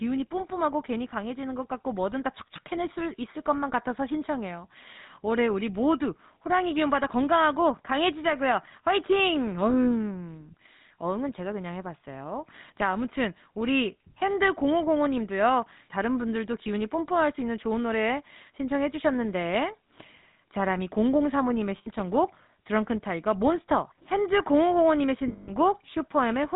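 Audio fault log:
throughout: GSM full-rate codec. The speech carries a buzzy, gravelly roughness from start to end. Nothing above 4 kHz survives, so it sounds narrow and dull. The codec models the vocal tract and drives it with sparse, regular pulses, which fits 13 kbps GSM.
21.78–21.88 s and 25.28–25.52 s: lost GSM frames. The speech briefly freezes into a rough, metallic ring. Each missing frame is filled by repeating the settings of the last good one. The first gap lasts 80 ms. The second is scattered over 200 ms, with the longest hold around 150 ms.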